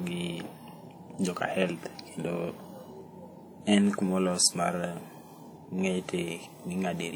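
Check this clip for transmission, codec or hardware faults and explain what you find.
One codec fault runs through the whole clip, from start to finish. The speech was most likely squeezed through WMA compression, a first-generation Windows Media Audio transform coder, at a rate that fits around 48 kbps. Its long transform blocks smear quantisation error across tens of milliseconds around each syllable, and weaker spectral detail is dropped. The result is plainly audible: a ringing, washy quality with a hiss that swells and fades with the speech, even though content still reaches about 20.1 kHz.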